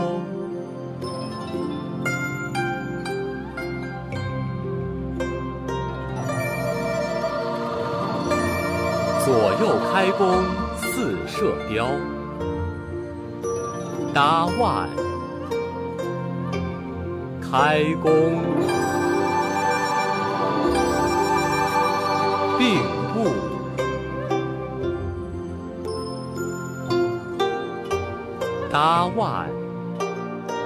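No technical faults are audible anywhere in the audio.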